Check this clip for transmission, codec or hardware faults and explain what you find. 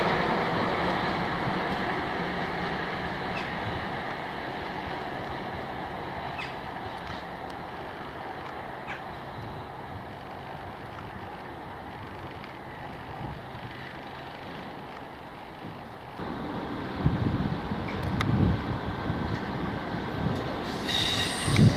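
Nothing found to point to any transmission, codec or hardware fault in the audio.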